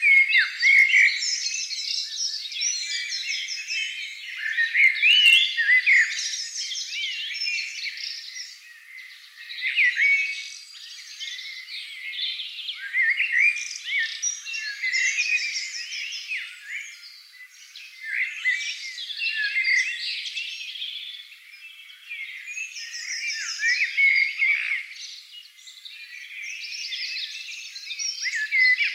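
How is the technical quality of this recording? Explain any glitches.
The recording has hard clipping in three places. From 0.17 to 1.04 s the level overshoots the ceiling by about 2 dB, from 4.84 to 5.37 s by about 4 dB, and at 5.93 s briefly by about 1 dB. A stage in the chain ran out of headroom, so waveform peaks were sliced flat. The squared tops generate high-order harmonics, heard as crackle on peaks, with the harshest grit in the 4.84 s stretch.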